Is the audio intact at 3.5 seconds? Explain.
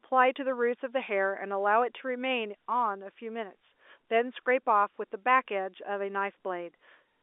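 Yes, the audio is intact at 3.5 seconds, with the speech carried cleanly through the G.711 telephone coding and no fault at that moment.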